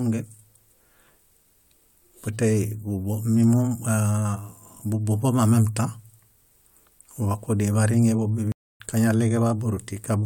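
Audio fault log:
8.52–8.80 s, stream reconnect. The speech drops out for 271 ms, then comes back roughly a third of a second further along, so a short stretch of the talk is simply skipped. The link to the stream failed and the player stopped outputting audio. It then reconnected and began decoding again from the live position. A fresh decoder starts cold. Its first frame or so sounds muted or eases in, so the return is soft rather than abrupt.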